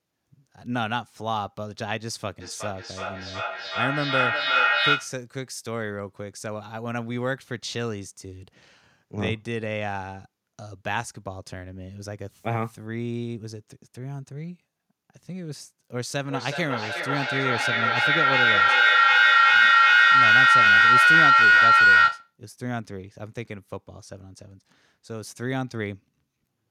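Feedback echo between two devices runs from 2.4 to 5.24 s. A second device in the room replays the speech, and this microphone picks it up again, beyond the reach of its own echo canceller. Each word returns about every 400 ms, growing thinner and more ringing, and peaks about 7 dB above the speech.

Feedback howl runs from 16.15 to 22.37 s. The same microphone-to-loudspeaker loop now gains level on each pass, so the repeats, roughly 400 ms apart, build rather than fade. They narrow into a tone around 1.5 kHz that reaches about 13 dB above the speech.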